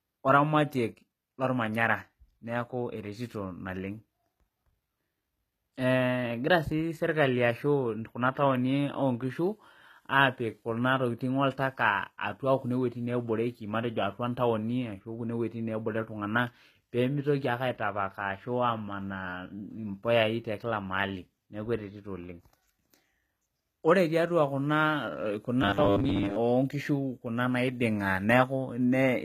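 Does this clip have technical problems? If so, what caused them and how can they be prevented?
Yes. Throughout the speech the treble sounds gritty and metallic, with lispy s sounds and nothing above 14.9 kHz. This is likely HE-AAC compression at a low bitrate, around 20 kbps: the upper band is rebuilt from copied lower bands, so its harmonics misalign. Encoding at a higher bitrate, or with plain AAC, would prevent this.

From 25.62 to 26.36 s the speech turns into a rigid, metallic buzz at 100 Hz. This is likely robotic sound from repeated short buffers: a roughly 10 ms chunk loops while most of the real audio in that span is skipped. Larger buffers or a less overloaded audio path would prevent this.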